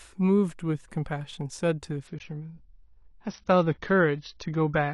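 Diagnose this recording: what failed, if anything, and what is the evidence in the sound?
Network and codec stage: an adaptive stream at a lower bitrate takes over at 2.07 s and runs to the end. The speech abruptly loses everything above 6.5 kHz and turns grainier, which fits a drop from about 96 to 24 kbit/s AAC. Unlike a dropout, there is no gap.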